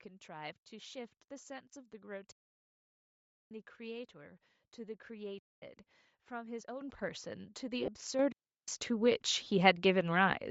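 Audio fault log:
throughout: Bluetooth LC3 compression, likely the cause of the plainly audible breathy, grainy edge on the speech, as the upper spectrum gets thinned and noise-filled, which fits about 32 kbps with 10 ms frames.
2.32–3.51 s, 5.39–5.62 s, 8.32–8.68 s: digital wireless dropout, the link drops out and the receiver mutes for 1.2 s, 0.24 s and 0.36 s, leaving clean near-silent holes without any noise burst.
6.81 s, 8.19 s: microphone volume stepped up, the call software bumps the input level in one step, by about 10 dB then about 7 dB, so speech and background jump together.
7.86 s, 9.44 s: lost LE Audio frames, 20 ms of audio goes missing each time and the decoder patches it with recycled, sign-scrambled spectrum, giving a brief noisy smear.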